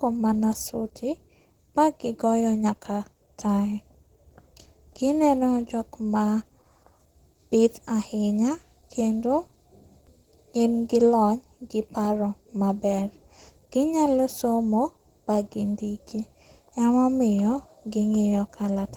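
Throughout, Opus voice compression makes the speech hoarse and slightly robotic, which fits about 16 kbps; a spectrogram shows coarse, smeared upper bands reaching 20.1 kHz.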